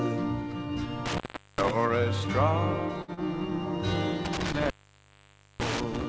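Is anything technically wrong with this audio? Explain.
Yes. There are three kinds of fault. The audio also passed through a call codec, with nothing above 8 kHz, which fits G.722.

An intermittent contact occurs from 1.06 to 1.71 s and from 4.25 to 6.04 s. A loose connection opens for about 400 ms, then about 900 ms. Sound drops out with crackle, leaving faint hiss.

A burst of packet loss hits at 3.02 to 3.11 s. About 60 ms never arrived. The receiver stretched the last sound and faded it, then jumped ahead.

A short concealed packet loss follows at 3.14 to 3.20 s. About 30 ms went missing. It was patched from the preceding sound, giving a brief smear.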